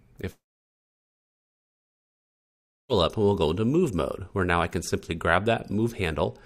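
At 0.31 s the sound stops abruptly and stays gone until 2.92 s. The last moment of audio smears into a brief fading buzz. Then there is silence for about 2.5 s. When the audio returns, it picks up further along, with roughly 2.6 s simply missing. This is likely a long network dropout: packets stopped arriving, the receiver briefly concealed the gap, gave up, and later resumed with whatever arrived next.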